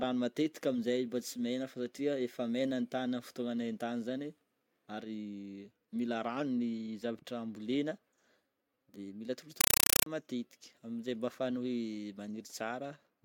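Speech runs until 9.61 s, when a compressed stream played as audio replaces it with harsh chattering static through 10.06 s. The undecoded AC-3 data, likely from a 256 kbps stream, appears as 5.33 ms full-band noise bursts repeating at 31.25 Hz, with flat zero-padding gaps between them in the waveform.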